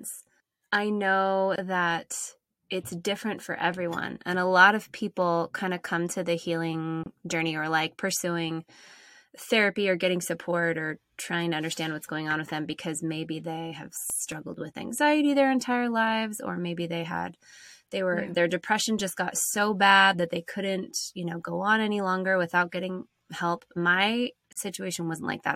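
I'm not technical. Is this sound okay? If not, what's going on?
No. At 1.56, 7.04 and 24.53 seconds the speech briefly cuts to silence, 24 to 44 milliseconds. That is a gap at a join of encoded pieces, where separately encoded sections were joined with their padding left in.

From 13.9 to 15.0 seconds and from 22.8 to 23.9 seconds there are CD scratch ticks: six tiny clicks each time, about five per second, where a damaged disc lost data once per rotation.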